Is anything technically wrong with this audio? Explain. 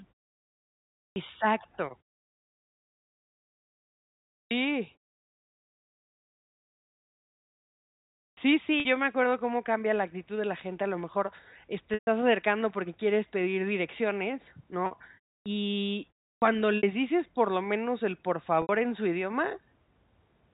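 Yes, there are two problems.

First, clipped starts after a pause at 1.12, 4.47, 8.33, 15.42 and 16.38 s. Each time roughly 40 ms of the onset is missing because the output path has dozed off in the silence and needs a moment to wake, so the speech snaps in abruptly without its first sounds.

Second, packet loss with pitch repetition at 8.80, 11.94, 14.86 (right after "porque quieres pedir direcciones"), 16.77 (just before "dices por lo menos") and 18.62 s (between "lo menos el por" and "en su"). The receiver fills each gap by looping the last pitch period. The 50 to 70 ms gaps come out as a brief held, buzzy tone. The 130 ms one at 11.94 s fades toward silence before the speech cross-fades back in.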